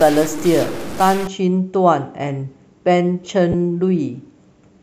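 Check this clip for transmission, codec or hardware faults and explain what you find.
Three faults are audible in the speech.

From 0.00 to 1.27 s there is distortion over the sound. The gaps between sounds are not clean but fill with a gritty noise floor. The likely cause is a stuck bit, one data bit held at a fixed value by a broken line or converter. About half the samples are then off by that bit's weight. Near zero the error flips with the sign, which is why the quiet parts turn noisy.

From 0.38 to 0.42 s, inside that distorted stretch, there are chunks out of order. A 20 ms block of audio plays one chunk late, after the block that should follow it. Nothing is missing, but the sequence is swapped. Three hard joins are created. The result is a brief garbled moment where the speech seems to stutter and jump.

From 3.52 to 3.55 s come lost LE Audio frames. About 20 ms of the Bluetooth stream is gone, which fits two 10 ms frames. 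The LC3 decoder fills the gap by reusing the last spectrum with random signs. So instead of a dropout, the speech turns briefly into a noisy smear. The loss is short, so the sound returns before any real fade into silence.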